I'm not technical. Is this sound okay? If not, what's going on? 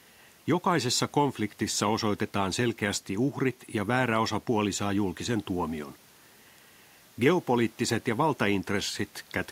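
Yes, nothing in the recording points to a technical problem, and the faint background noise you may notice is just the natural sound of the room, sitting well beneath the speech.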